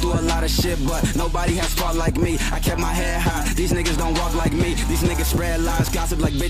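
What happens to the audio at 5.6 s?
Nothing goes wrong at 5.6 s: the audio there plays through cleanly, with no dropout, click, distortion or other fault.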